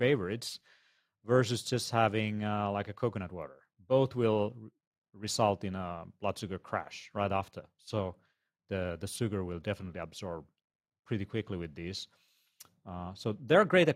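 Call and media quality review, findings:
Nothing stood out on listening to the speech recording, so there are no findings to log for this clip.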